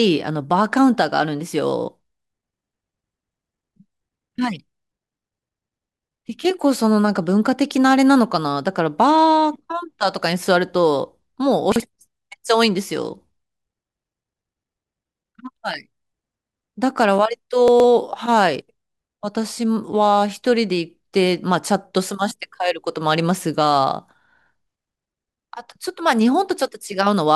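Speech with chunks out of order at 11.72 to 11.80 s and 17.68 to 17.84 s: a 40 ms chunk plays one and then three chunks late, leaving jumbled fragments and hard joins.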